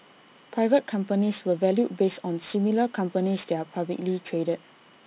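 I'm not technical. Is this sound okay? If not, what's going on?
No. Throughout the whole clip the speech has aliasing. The recording was converted to a lower sample rate, from 16 kHz down to 8 kHz, without first removing the high frequencies that the new rate can't hold. Anything above 4 kHz, such as the hiss of s and sh sounds, gets folded back down below 4 kHz at the wrong pitch. That gives those sounds a gritty, metallic edge that wasn't in the original.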